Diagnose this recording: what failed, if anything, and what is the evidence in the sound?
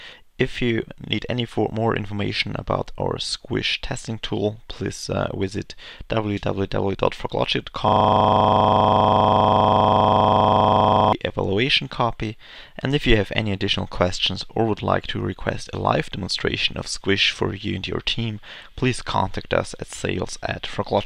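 Driver or buffer: system hang loop, 7.88 to 11.13 s. The stalled ring buffer replays one 40 ms slice exactly, a steady 25 Hz buzz rather than packet-loss gaps.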